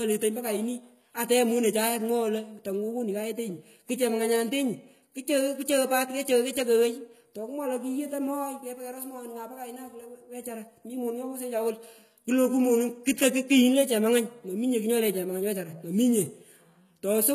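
Throughout the speech, the treble sounds bright yet synthetic, with s sounds gritty and lispy, likely from HE-AAC compression at a very low rate, which fits around 20 kbps. Upper bands are rebuilt by copying lower ones, so a spectrogram shows repeated, smeared treble texture and nothing above 14.9 kHz.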